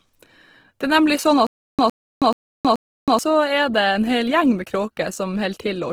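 Across the whole speech clip, tones sound rough and grainy rather than swirly, with audio still reaching about 20.2 kHz. This is likely Opus compression in its music mode at a rate near 16 kbps, filling starved bands with folded or noisy content.

From 1.47 to 3.19 s, a 110 ms burst of sound repeats four times, each followed by 320 ms of dead digital silence, a cycle of 430 ms. This stutter with silent gaps likely comes from a stalling stream replaying its last fragment, and the intended audio there is lost.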